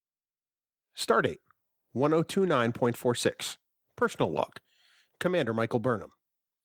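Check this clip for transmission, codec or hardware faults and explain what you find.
Nothing wrong turns up anywhere in this speech recording.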